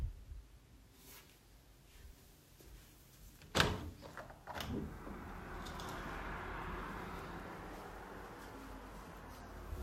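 From 9.05 to 9.78 s, GSM phone buzz appears. A nearby phone's steady 217 Hz bursts are rectified into a harsh, harmonic-rich rasp, about 23 dB below the sound.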